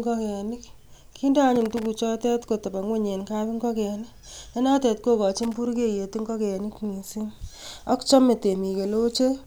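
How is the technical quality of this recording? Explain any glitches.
The recording has two bursts of loose connector crackle in the speech. A worn or dirty contact in the signal path is making and breaking as it shifts, so the audio is chopped on and off in rapid, uneven steps, and any DC on the line turns each break into a pop. The result is a ragged scratching crackle, first from 1.56 to 1.86 s and again, more briefly, from 5.43 to 5.57 s.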